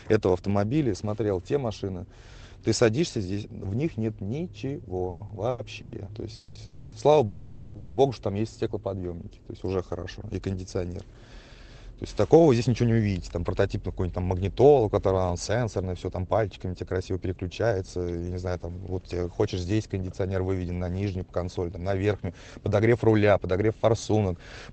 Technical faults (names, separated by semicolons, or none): repeated stalls (stutter); call audio freeze; jitter buffer speed-up